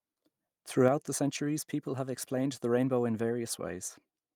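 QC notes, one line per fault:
0.88–4.36 s, sudden gain jump: the speech drops by about 4 dB in a single step and stays at that lower level to the end, with the background noise falling by the same amount at the same instant. The likely cause is a digital gain setting applied with no ramp. Unlike a fade or an automatic gain control, there is no gradual slope and no recovery, and unlike a compressor it does not follow loudness; the noise floor drops exactly in step with the speech.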